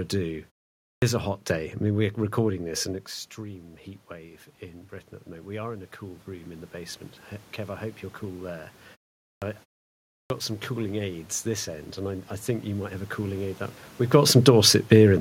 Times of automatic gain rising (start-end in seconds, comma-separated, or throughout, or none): 3.35-13.46